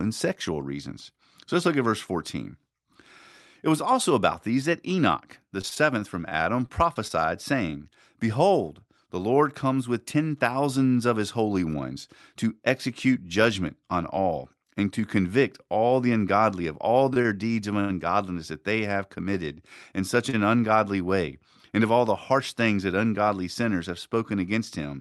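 From 5.61 to 7.12 s the speech suffers repeated packet loss (robotic sound). Packets kept failing to arrive, eight times in that stretch, and each hole was bridged by extending the last bit of audio. The longest gap is 22 ms. About 120 ms of real speech is gone, replaced by 131 ms of stretched fill, so the passage turns choppy, with small pieces clipped out.

Later come short stalls from a late packet. Each time the jitter buffer ran dry, the receiver held the last sound until the delayed packet arrived, then resumed where it left off, so nothing is lost. The holds are at 17.14 s (22 ms), 17.22 s (25 ms), 17.80 to 17.91 s (90 ms) and 20.29 s (37 ms). The 90 ms one is the longest, a drawn-out sustain. Throughout, the Opus call path runs at about 48 kbps and limits the top end to about 12 kHz.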